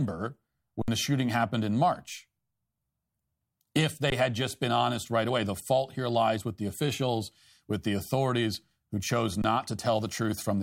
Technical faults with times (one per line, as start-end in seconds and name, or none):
0.82-0.88 underrun with held sample
4.10-4.12 underrun with held sample
9.42 underrun with held sample